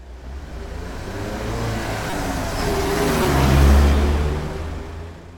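At 2.10–2.13 s and again at 3.23–3.25 s, a corrupt frame decoded is heard as a brief chirp-like burst of noise. Bit errors in a few compressed frames were decoded anyway, placing energy at wrong frequencies. The second burst is louder, peaking around -5 dBFS against about -10 dBFS for the first.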